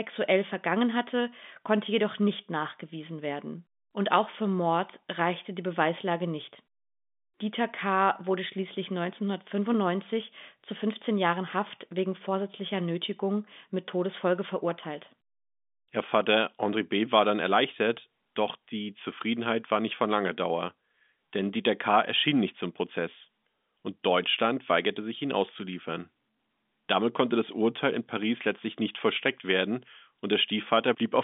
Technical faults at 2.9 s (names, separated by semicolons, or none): none